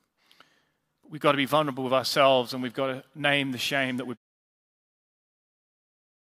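No technical faults in the speech; the level eases down in a smooth editorial fade-out from around 4 s to 4.18 s, with no click or hard edge.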